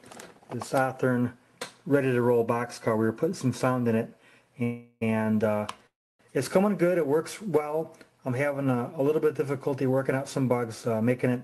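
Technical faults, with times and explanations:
4.63 to 5.03 s, call audio freeze: likely delayed packets left the jitter buffer empty, so the last sound carries on as a fading buzz or hiss for about 0.38 s, then resumes with nothing lost.
5.87 to 6.27 s, call audio freeze: the same stall, with the held sound dying to silence for most of its 0.33 s gap before the audio picks up where it stopped.
10.94 to 11.35 s, jitter buffer speed-up: an overfull buffer is drained by cutting short pitch-period pieces, about 40 ms in all, so the audio runs hurried at 108% speed at unchanged pitch.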